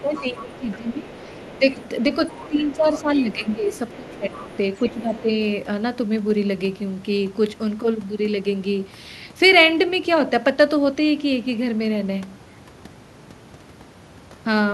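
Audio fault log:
0.00–1.89 s, 2.25–3.51 s and 3.92–5.21 s, other side's voice leaking through: a second, fainter voice sits beneath the main talker, about 20 dB below the speech in the first two stretches and nearer 25 dB below in the third. The likely cause is the far side playing from the talker's loudspeaker and reaching the microphone, with the echo canceller leaving some of it in the signal.
0.01–1.79 s, 2.48–4.50 s and 4.90–5.28 s, speech suppressed in double talk: the main talker's level sinks, by as much as about 15 dB in the first two spans and about 10 dB in the brief last one, around one and a half seconds of speech affected in each longer span. With both sides talking at once, the echo canceller likely could not separate the talker from the echo and turned both down together.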